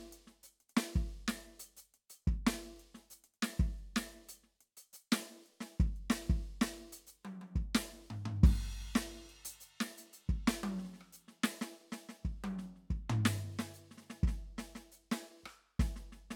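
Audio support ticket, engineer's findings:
Music clip reviewed; no audible faults found.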